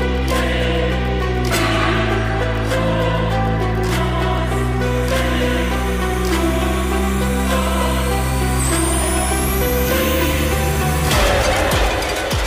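Timecode bleed from 4.84 s to the end: linear timecode leaking in from a neighbouring track or cable adds a chirping warble near 1 and 2 kHz, roughly 20 dB below the audio.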